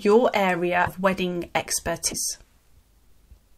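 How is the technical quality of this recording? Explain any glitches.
The recording has two short glitches in the speech, at 0.85 to 0.88 s and at 2.10 to 2.13 s. Each lasts about 30 ms, roughly one MP3 frame of 26.1 ms. At each, the speech skips forward and one frame's worth of sound is garbled. The likely cause is a broken MP3 bit reservoir: frames were lost, so the next frame reached back for borrowed data and decoded bytes belonging to a different frame.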